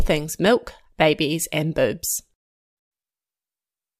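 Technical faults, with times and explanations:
0.46 s, DAB burbling: a brief burst of noise blips just before "babies and", in single sub-bands across a handful of frames. Weak reception lets bit errors, around a fifth of a percent, slip past error correction and corrupt MP2 samples and scale factors.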